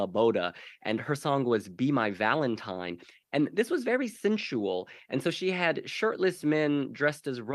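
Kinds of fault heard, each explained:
No technical faults can be heard in this recording.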